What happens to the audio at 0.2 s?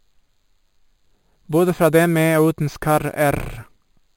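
At 0.2 s, as everywhere else in this speech clip, you're hearing imaging from sample-and-hold upsampling. It looks like the audio began at about 11 kHz and was raised to 48 kHz by repeating each sample, with nothing to smooth the steps. That leaves mirrored copies of the spectrum, the first sitting between 5.5 and 11 kHz at about 20 dB below the speech. It comes across as a bright metallic fizz riding along with the voice.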